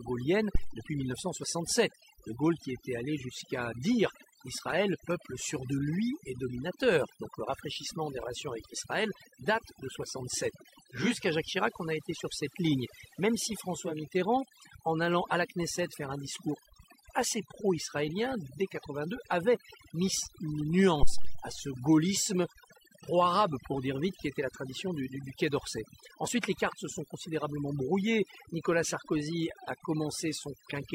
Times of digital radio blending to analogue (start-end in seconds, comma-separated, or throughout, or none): 10.84-14.12